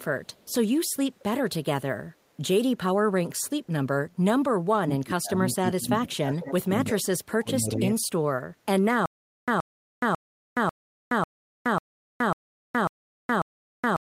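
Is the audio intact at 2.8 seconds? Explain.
Yes, the audio is intact at 2.8 seconds, with no dropout, click, distortion or other fault audible at that moment.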